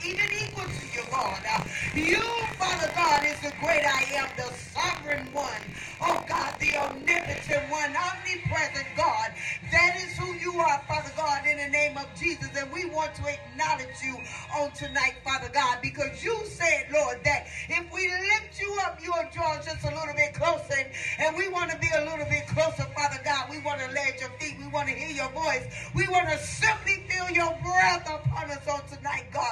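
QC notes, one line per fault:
0.00–7.55 s, buffer tearing. A steady robotic buzz rides on the sound at about 47 Hz, the rate at which the buffer repeats, which fits a 1024-sample buffer. The writer and the hardware reader have slipped out of step and cross inside each period. So roughly a tenth of every buffer plays stale audio from about 70 ms earlier. Hard joins on both sides of that slice cause the rattle. It is heard only while sound is present.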